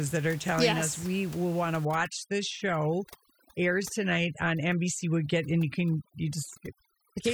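A speech recording whose background, from 1.85 s to the end, collapses into near silence dotted with twinkling specks: overdone noise removal. The room noise, about 21 dB under the speech, was reduced too strongly, so individual frequency bands near the tool's noise estimate drop out, dragging quiet parts of the voice with them. Unlike codec artefacts, the damage follows the noise floor, worst in pauses and soft syllables.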